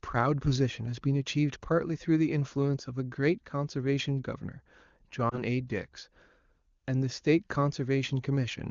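At 5.30 to 5.42 s the speech briefly dips or warbles, then returns weak or rough for a moment: lost AMR speech frames. The wideband decoder concealed what sounds like a single missing frame by reusing the last good pitch and vocal tract settings at reduced gain.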